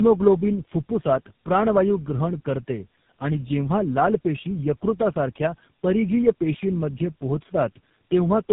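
From start to finish the speech sounds rough, muffled and warbly, with nothing above 3.7 kHz. This is tandem speech coding. The call was decoded and re-encoded at each link, so every low-rate speech coder worked on the already damaged output of the one before, and the losses stacked. The degree of damage points to about three speech codecs in a row, plausibly two AMR-NB stages ending in GSM full rate.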